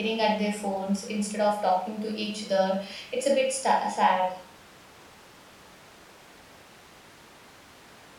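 No technical faults can be heard anywhere in the recording.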